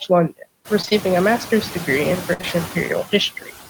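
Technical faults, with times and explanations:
throughout: noise suppressor artifacts. The suppressor pulls down what it judges to be steady noise by about 13 dB, band by band and frame by frame. The background sinks in the pauses and swells back under the speech. The room noise rises noticeably at around half a second.
0.81–0.85 s, 0.85–0.89 s, 0.89–0.93 s: short concealed packet loss. Three back-to-back gaps of about 20 ms each never arrived. Each was patched by extending the previous sound for about 15 to 23 ms, then blended back into real audio. The words "a master's degree in" follow the middle gap. It sounds like a quick smear or wobble rather than a clean cut.
2.33–2.41 s: burst of packet loss. About 60 ms went missing in one stretch, right after "a master's degree in". The receiver held the last sound and let it fade over those 60 ms. The result is a brief stuck buzz or dying hiss. 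Then the audio picks up further along, with that slice simply gone.
2.41–2.45 s: short concealed packet loss. Immediately after the burst, another 20 ms gap follows. It is filled with about 19 ms of continued sound before real audio takes over. It extends the smeared patch by a moment.
3.40–3.51 s: speech cut by the noise suppressor. For roughly a tenth of a second, the suppressor mistook part of the speech for background. It pushed that part down by as much as about 10 dB. That part sounds swallowed and faint.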